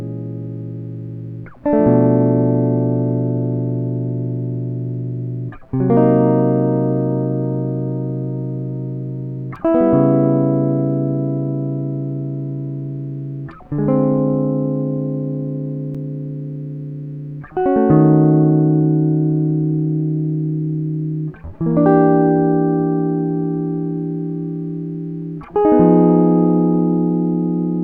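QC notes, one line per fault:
9.56 s and 15.94 s, block of digital silence: a sharp tick in the music as about 2.7 ms of samples drops to zero, which fits an unfilled 128-sample buffer.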